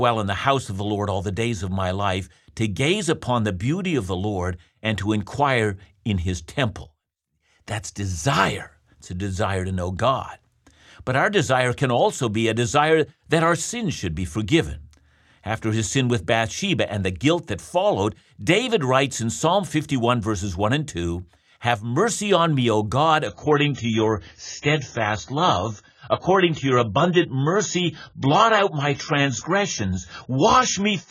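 Speech clip in which, at 23.27 s, the sound quality abruptly worsens with no gap and stays that way to the end at 31.11 s: codec artefacts become more noticeable and everything above 7 kHz disappears, leaving the audio dull and band-limited. This is an adaptive stream at a lower bitrate, where a slowing connection made the player switch to a cheaper encoding. The change in artefacts and bandwidth fits a drop from about 96 to about 16 kbit/s AAC.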